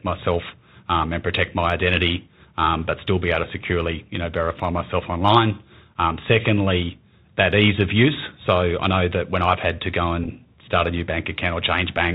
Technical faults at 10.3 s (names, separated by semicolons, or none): Bluetooth CVSD headset codec; Bluetooth headset packet repeated